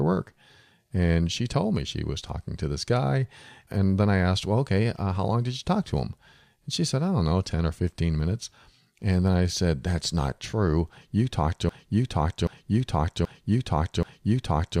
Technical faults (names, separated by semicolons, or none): broken-record loop